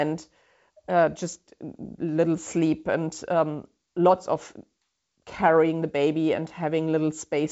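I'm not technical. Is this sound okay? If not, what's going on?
Yes, nothing here sounds wrong.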